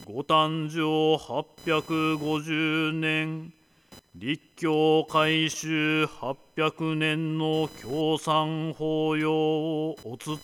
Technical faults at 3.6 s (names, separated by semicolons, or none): computer activity noise